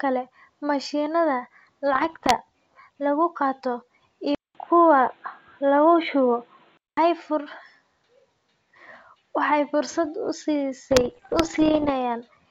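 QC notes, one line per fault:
1.94–2.37 s and 10.91–11.91 s, bit errors on an ADPCM link: pops and rough, gritty bursts with brief level jumps, heavier in the second run. Flipped bits in the G.722 stream knock the decoder's step size and predictor off, so each error rings on for milliseconds.
4.35–6.97 s, input switched to a poorer device: after a 200 ms gap the sound turns dull and boxy, with nothing above 4.2 kHz, a level shift of about 5 dB and faint new background noise. Likely a change to a narrower-band microphone or headset call profile.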